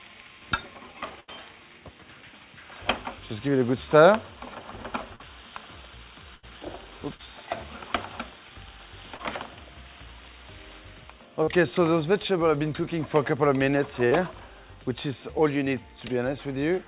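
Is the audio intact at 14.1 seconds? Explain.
No. From 14.07 to 14.14 s there is a short concealed packet loss: about 40 ms of audio never arrived in time, and the receiver covered the gap with roughly 42 ms of synthesized sound, extending the preceding signal before crossfading back into the real stream. It is heard as a brief smear or wobble. The band stops at 4 kHz throughout, consistent with a G.711 A-law call path.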